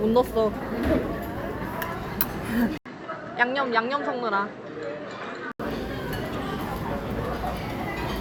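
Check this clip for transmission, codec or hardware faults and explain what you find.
One fault. From 2.78 to 5.60 s the sound turns duller and a few decibels quieter, with nothing above 8.1 kHz, a new faint noise floor and an 80 ms gap at the switch. The likely cause is an input switched to a poorer device with a narrower band, before it switches back.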